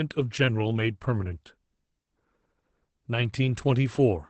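From start to finish the speech carries Opus voice compression, and the damage is plainly audible. The band stops near 8 kHz, and the coarsely coded excitation leaves the voice hoarse and faintly robotic, which points to a low rate around 12 kbps in SILK mode with 20 ms frames. A simple low-pass filter would only dull the top. Here the voice itself turns rough and buzzy, which is the mark of a linear-prediction coder.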